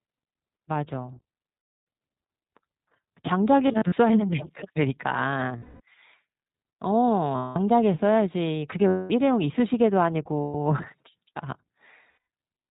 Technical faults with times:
0.00-12.71 iLBC codec
1.55-1.85 lost iLBC frames
3.68-3.94 lost iLBC frames
5.58-5.81 lost iLBC frames
7.36-7.58 lost iLBC frames
8.88-9.12 lost iLBC frames
10.40-10.55 lost iLBC frames
12.10-12.22 lost iLBC frames

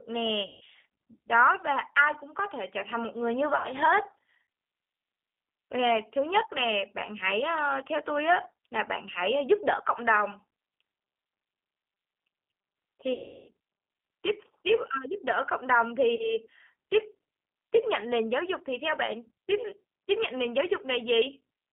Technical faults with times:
0.00-21.72 G.729 codec
0.47-0.62 VoIP packet loss concealed by the speech codec
3.56-3.68 VoIP packet loss concealed by the speech codec
8.43-8.47 VoIP packet loss concealed by the speech codec
13.14-13.50 VoIP packet loss concealed by the speech codec
16.15-16.37 VoIP packet loss concealed by the speech codec

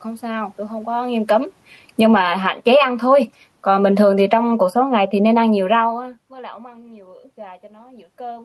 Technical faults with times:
0.88-2.76 automatic gain falling
2.31-3.18 automatic gain rising
3.54-5.95 automatic gain falling

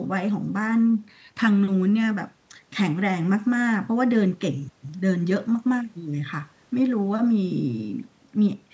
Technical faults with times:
none

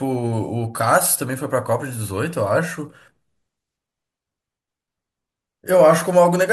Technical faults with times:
none

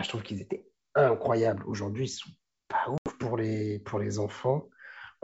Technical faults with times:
2.98-3.15 packet loss on an ADPCM call

